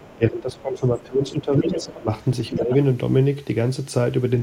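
A faint second voice sits under the opening, from 0.00 to 0.16 s, roughly 30 dB below the speech. This is the other side's voice leaking through, likely because the loudspeaker's sound reached the microphone and the echo canceller left a residue. From 0.16 to 2.09 s the talker's speech repeatedly sinks and thins, in pieces adding up to about a second and a half, dropping by as much as about 15 dB. This is speech suppressed in double talk, likely because both sides were speaking and the canceller, unable to separate the talker from the echo, turned everything down. Inside that stretch, from 1.61 to 1.99 s, the leaking voice comes through strongly, only about 5 dB under the speech. A brief scrap of it returns at 2.47 to 2.53 s at about 15 dB below, and the talker dips again by about 10 dB from 2.57 to 2.72 s.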